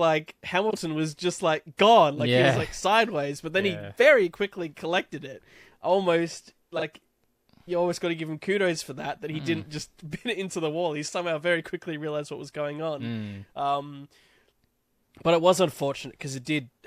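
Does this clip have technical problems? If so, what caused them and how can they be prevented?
Yes. This speech clip has frames out of order twice, from 0.70 to 0.77 s and from 6.76 to 6.82 s. Each time, two neighbouring single frames of about 26 ms were decoded in swapped order. That short stretch plays with its two halves swapped. It comes out as a brief garbled flutter. No time goes missing. Prevention: reorder packets by sequence number in the jitter buffer before decoding.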